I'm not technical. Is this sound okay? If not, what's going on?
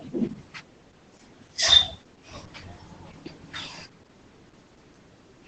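No. Opus voice compression runs through the whole clip, from the first moment to the last. The speech was squeezed hard by a phone-style voice coder, which keeps only a rough outline of how the voice moves and sends everything above about 8 kHz away. That is why the voice sounds muffled, a little hoarse and faintly robotic. The damage is heavy, which suggests the coder was given very little data to work with.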